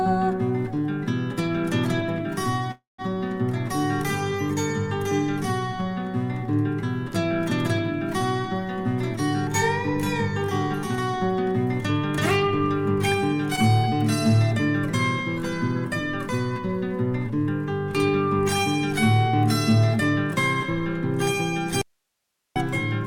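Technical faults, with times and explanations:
2.71 to 3.16 s, call audio freeze: The sound stops and is replaced by a short held continuation that fades to silence. The fill lasts 270 ms, of which 170 ms is silent. This is likely a run of delayed packets that left the jitter buffer empty. The receiver extended the last sound until the data caught up. Playback then resumes where it stopped. Nothing is lost, but the rest of the clip now runs 270 ms later.
13.55 to 13.60 s, short stall from a late packet: A brief hold interrupts the flow here. One packet arrived too late and the jitter buffer ran dry for a moment. The receiver stretched the last sound by 20 ms to cover the wait, then carried on from the same point. No audio is missing. The stretched moment sounds slightly held, with a faint buzz or dip, and later audio sits 20 ms behind.
21.82 to 22.56 s, audio dropout to a faint residue: The sound cuts out abruptly for about 741 ms and then returns mid-flow. 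The gap holds only hiss, roughly 55 dB below the normal signal. The change is sudden, so it is heard as a break rather than a pause or fade. This is likely a loss of the source signal while the downstream path stayed live, so only its own noise floor got through.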